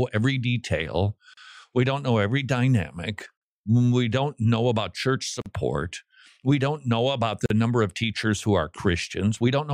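Short silences cut into the continuous speech at 1.34 s (about 36 ms), 5.42 s and 7.46 s (about 43 ms each), with smeared edges before the sound resumes where it stopped. These are gaps at joins of encoded pieces: separately encoded segments, about two seconds long, were spliced without trimming each encoder's start delay and end padding.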